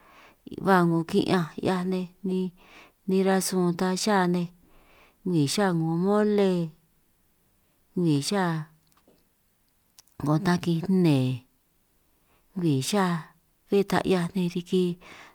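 Speech recording, no audible technical faults found.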